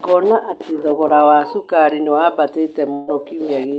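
At 2.93 s a burst of packet loss hits the call. Several packets arrive too late or not at all, so the receiver extends the last sound for about 140 ms, fading it out until the audio resumes at 3.09 s with roughly 140 ms of speech skipped. Throughout, the band limit of the Opus call path, near 8 kHz, can be heard.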